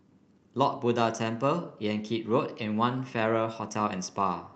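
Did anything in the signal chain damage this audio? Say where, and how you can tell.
No, nothing in the chain damaged this speech: it came through a call path whose codec caps the bandwidth at 8 kHz, which fits Opus at about 32 kbps, and neither that stage nor the jitter buffer introduces any fault.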